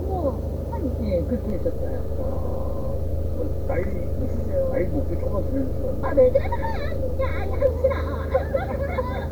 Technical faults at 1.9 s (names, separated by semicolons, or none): DC step